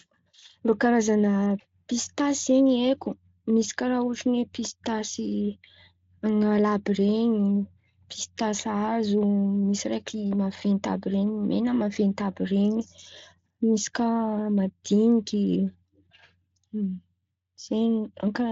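No technical faults turn up anywhere in the speech, which carries the light texture of the Speex codec at a setting that sounds like roughly 24 kbps, with nothing audible above about 7.6 kHz.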